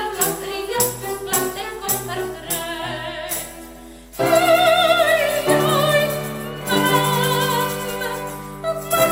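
Mains hum runs under the whole clip. It is a steady low tone at 50 Hz. Power-line current has leaked into the signal, likely through a ground loop or a nearby transformer. The hum sits roughly 25 dB below the sound and never lets up.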